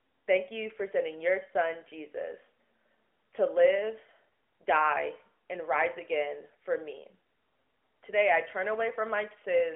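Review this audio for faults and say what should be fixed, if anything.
No faults; nothing needs fixing.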